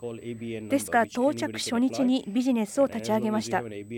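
Throughout, USB whine: a fixed 8 kHz tone roughly 35 dB down, from 125-microsecond microframes leaking into the supply, unlike low mains hum.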